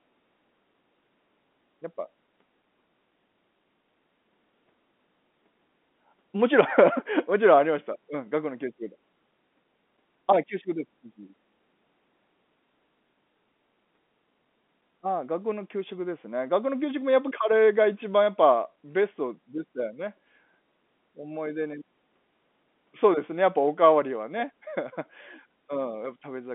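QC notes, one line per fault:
No faults heard; telephone-band G.711 coding, nothing above 3.6 kHz.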